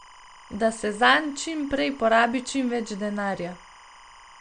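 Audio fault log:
throughout: timecode bleed, a steady chirping warble about 25 dB below the speech, alternating near 1 and 2 kHz at a 25-frame rate; the spectrogram shows twin horizontal tone bands.
throughout: a hard treble cutoff at 9.4 kHz with watery, swirly artefacts, likely from MP3 compression at a low bitrate around 48 kbps; the spectrogram shows a flat ceiling and flickering holes.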